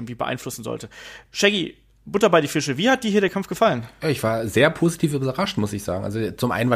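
From 2.98 to 3.43 s, CD scratch ticks occur. A scratch destroys data once per disc turn, causing four brief ticks, each only a few milliseconds.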